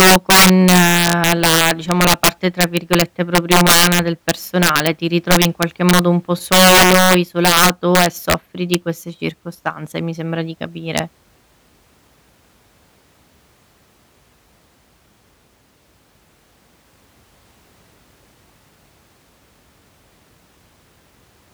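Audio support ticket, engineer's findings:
Integer overflow on speech peaks: 0.00–4.87 s (about 11 dB over), 5.31–5.99 s (about 6 dB), 6.52–8.34 s (about 9 dB), isolated cracks at 8.74 s and 10.98 s. Gain or mix stage wrapping instead of saturating; peaks flip sign, harsh cracks.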